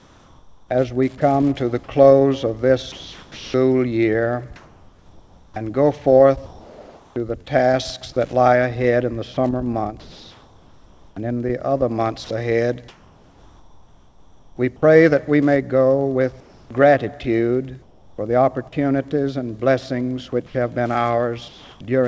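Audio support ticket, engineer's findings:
Wi-Fi interference, throughout. Steady ticking near ten per second, about 40 dB below the signal. Period of 102.4 ms matches a Wi-Fi beacon interval. Likely a nearby Wi-Fi radio coupling into the audio circuit, where the RF bursts are rectified into audible clicks. Band-limited to 8 kHz by the call path, consistent with G.722 at 64 kbps.

Comfort noise in place of the background at 0.00–1.20 s (about 0.72 s replaced), 16.40–18.18 s (about 0.66 s), and 20.46–21.80 s (about 0.40 s). Real background gives way to smooth, featureless hiss. Likely discontinuous transmission: the sender stopped sending during pauses, and the receiver synthesised noise from sparse updates.

Sound dropped by the voice detector at 1.18–1.20 s (10 ms lost, 20 ms filled) and 20.46–20.54 s (50 ms lost, 80 ms filled). Brief sound vanishes into steady noise, then returns. Likely sender VAD misjudged quiet material as background and halted transmission.

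Sound chopped by the voice detector at 2.92–7.48 s (about 2.4 s replaced) and 9.34–14.58 s (about 2.9 s replaced). Choppy, stop-start sound. Likely VAD toggling repeatedly, swapping soft passages and edges for comfort noise.

Onset clipped by the voice detector, 16.67–16.70 s. First 30 ms missing, so the sound starts abruptly with no soft attack. Likely slow VAD trigger after the pause, with comfort noise covering the unsent start.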